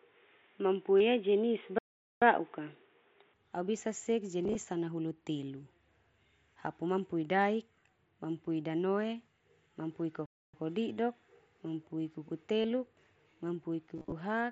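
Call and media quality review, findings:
Input switched to a poorer device, 0.0–3.34 s: dull, boxy band, noise floor about 45 dB below signal, level about 5 dB different. Likely cause: input on a narrowband headset profile or secondary mic. Distinguished from the mSBC path, which carries up to 8 kHz after 3.34 s. Change is abrupt with no silence at the switch, so a device change rather than a gradual filter or gain drift.

Concealed Bluetooth headset packet loss, 0.99 s: one 22.5 ms hole filled by repeating the previous waveform. 4.43–4.55 s, between "bisa sek" and "sanahulu telu": losses scattered over 120 ms, longest run 22.5 ms, buzzy, with warble at recovery. 12.62–12.64 s: 30 ms, brief buzz. 13.95–14.12 s: scattered over 165 ms, longest run 30 ms, stuttering buzz. Unlike a stall, level holds and there is no gap.

Playback stall, 1.78–2.22 s: output fully silent for 431 ms, then sound resumes. 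10.26–10.54 s, right after "daik mampui danoe mampui": 276 ms of silence. Likely cause: player buffer underrun or blocked audio thread. Distinguished from concealed packet loss by true silence instead of a held buzzy tone. The gaps also last hundreds of milliseconds, not tens.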